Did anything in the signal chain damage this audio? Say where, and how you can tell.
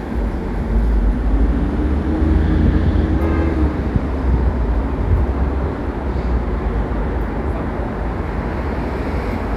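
Yes. From 0.97 s to 3.20 s the audio plays 5.7% slow and drops about 101 cents, roughly a semitone, then snaps back to normal. From 8.25 s to the end it runs 5.7% fast and rises about 95 cents. Speed and pitch move together and the boundaries are abrupt. That points to a drift correction step at the driver or buffer stage, likely a clock-matching resampler shifting its playback rate in one jump to refill or drain its buffer.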